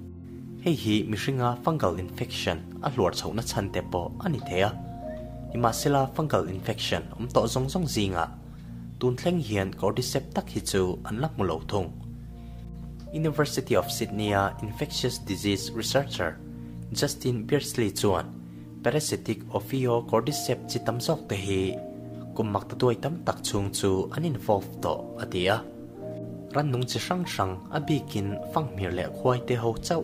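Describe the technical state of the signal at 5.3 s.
A single sharp click sounds at 5.33 s, a brief tick that appears as a thin vertical line running through the whole spectrum. The likely cause is dropped samples: a fraction of a millisecond of the stream went missing, so the waveform jumps straight from one value to a later one. That gap is far too short to remove any audible sound. Only the discontinuity itself is heard, as the click.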